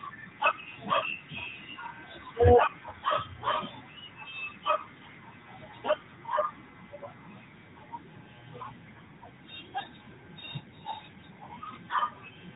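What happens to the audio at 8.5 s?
At 8.5 s the speech carries the AMR narrowband mobile codec, present throughout the clip: nothing above 4 kHz survives, and a pulse-driven vocal-tract model gives a plainly audible buzzy, synthetic edge, fitting a higher-rate mode near 10 kbps. A simple low-pass would dull the sound without adding that synthetic texture.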